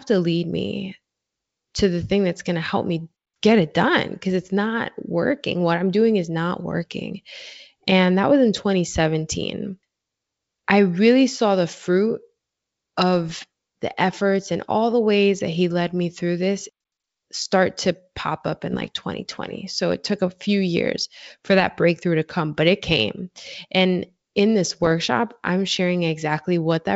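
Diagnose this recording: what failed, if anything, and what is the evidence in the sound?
Bit errors on the ADPCM transmission link upset the decoder's step size and predictor, giving rough pops at 13.29–13.44 s, 18.71–18.88 s and 24.70–24.92 s.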